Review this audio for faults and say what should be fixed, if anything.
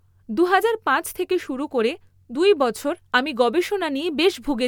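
Nothing needs fixing here: the speech signal shows no audible technical faults anywhere in the recording.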